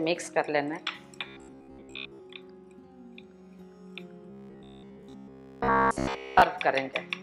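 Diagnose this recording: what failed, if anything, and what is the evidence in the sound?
The sound collapses into a rigid, metallic buzz at a fixed pitch of 66.7 Hz, from 1.28 to 2.21 s and again from 4.30 to 6.42 s; in the first stretch most of the sound is replaced, in the second all of it. This is robotic sound from repeated short buffers, likely a driver or buffer stage starved of new audio and looping the last 15 ms block, whose length sets the buzz.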